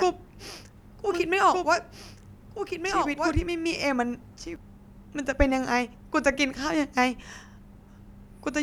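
From the opening of the speech until 4.56 s, every phrase is shadowed by an identical second copy trailing about one and a half seconds behind and about 5 dB quieter. It is clean and full-band, with no decay or room colour, and it stops abruptly at 4.56 s. This doubled audio track is likely the same signal captured a second time through a slower path and mixed back in out of step with the original.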